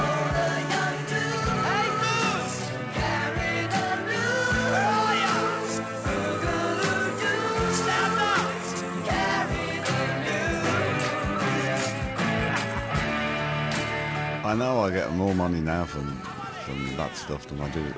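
No technical faults occur anywhere in the audio, so there is nothing to describe in time order, and the G.722 call path it came through carries nothing above 8 kHz.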